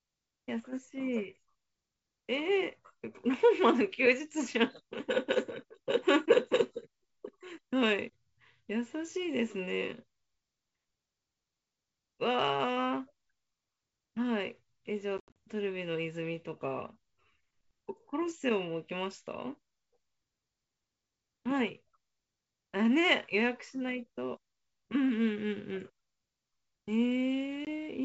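From 15.18 to 15.39 s, packet loss on an ADPCM call punches hard-edged silent holes, about 140 ms in total, scattered over 180 ms, with the longest gap 80 ms, which points to around fifteen lost packets. A brief 20 ms hole follows at 27.65 s. Unlike a plain dropout, the sound comes back slightly distorted for some tens of milliseconds. The decoder's adaptive predictor and step size have drifted from the sender's and must re-converge. The wideband G.722 coding itself sounds clean.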